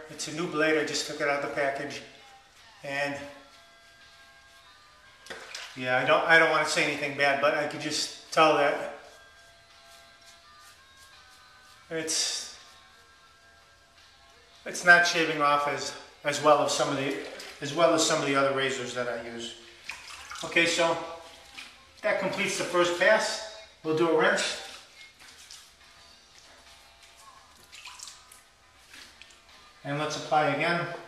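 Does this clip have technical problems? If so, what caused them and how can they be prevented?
No, no technical faults detected.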